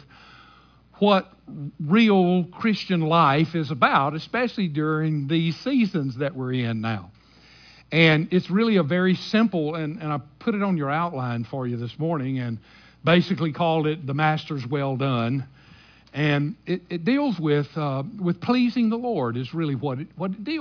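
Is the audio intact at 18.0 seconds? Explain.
Yes, the audio is intact at 18.0 seconds, with no fault audible at that moment.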